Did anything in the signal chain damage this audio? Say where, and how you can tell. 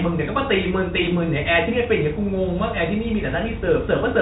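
No, nothing in this speech stood out as damage on listening, with the band ending around 3.8 kHz as expected for G.726 at 40 kbit/s.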